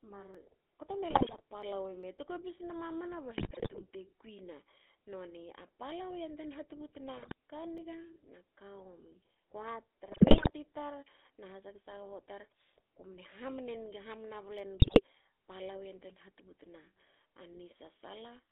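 It's a speech clip that's been through the GSM full-rate codec the whole way, with that buzzy, gravelly roughness from the pulse-driven vocal-tract model, and the band squeezed to roughly 250 Hz to 3.6 kHz, which fits the 13 kbps full-rate coder. There are jumps in the sound at 0.35 s, 7.78 s and 14.59 s, where the audio skips ahead. That's likely a dropped buffer (overrun), where samples got overwritten before being read, losing around 15 ms at the first and only a few milliseconds at the others. GSM bit errors turn the voice into squawks, pops and gargling at 1.11–1.41 s, 3.37–3.84 s, 7.17–7.33 s, 10.12–10.51 s and 14.80–15.02 s. That's corrupted filter, pitch or gain values reaching the decoder off a weak link.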